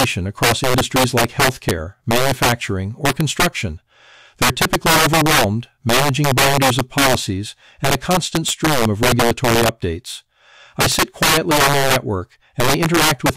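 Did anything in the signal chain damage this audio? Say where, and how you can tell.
Yes: integer overflow in a fixed-point gain or sample-format conversion stage, present throughout. The signal is pushed about 9 dB past full scale, and around one sample in twenty wraps to the opposite sign, giving violent cracks on loud passages. Clipping would flatten those peaks into a duller buzz instead.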